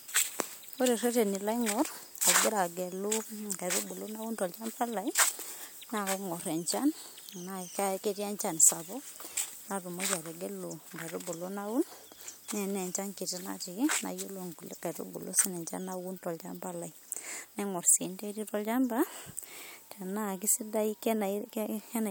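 No technical faults are audible.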